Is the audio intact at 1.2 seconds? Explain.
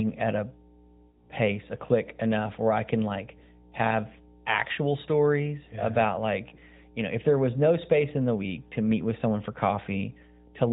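No. From 1.08 to 1.30 s, between "at a" and "pace a click enough", there are lost AMR speech frames. About 60 ms of coded speech failed to arrive intact, which fits three 20 ms frames, so the decoder filled the hole by reusing the last good pitch and vocal tract settings at falling gain. The sound smears into a drawn-out, fading warble before recovering weakly. A plain dropout would cut to silence or click instead.

Under that moment, as across the whole clip, runs a mains hum: a steady 60 Hz tone with low harmonics, roughly 20 dB below the speech. It comes from a ground loop or nearby transformer leaking the power line into the signal. Its fixed pitch and constant presence distinguish it from broadband background noise or rumble, which would sound like hiss or shift with the sound. The AMR-NB narrowband coding at 12.2 kbps does only light damage, with nothing passing above 4 kHz.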